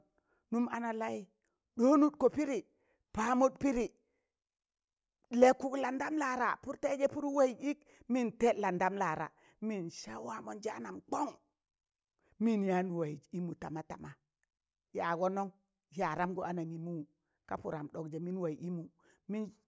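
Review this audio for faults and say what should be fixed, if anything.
Nothing needs fixing; no faults can be heard here.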